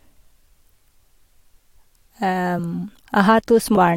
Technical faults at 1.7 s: none

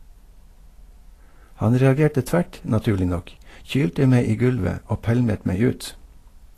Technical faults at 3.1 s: Vorbis compression

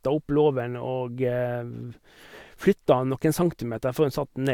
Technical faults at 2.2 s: none

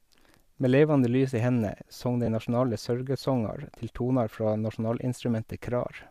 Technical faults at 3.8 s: none

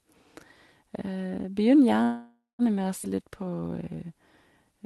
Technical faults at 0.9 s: none

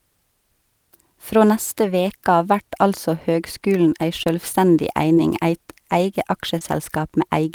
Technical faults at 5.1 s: short concealed packet loss

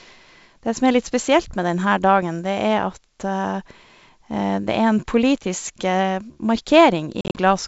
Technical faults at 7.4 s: packet loss on an ADPCM call

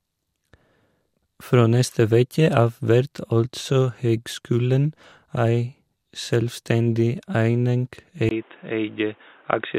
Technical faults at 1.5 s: DAB burbling

